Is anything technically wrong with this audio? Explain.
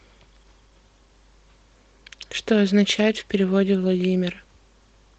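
No, nothing in this speech clip points to a technical fault. The Opus voice compression is doing its job, with the full band kept and only the faint coding texture you would expect from a hybrid SILK-and-CELT encode at a moderate voice bitrate, around 20 kbps.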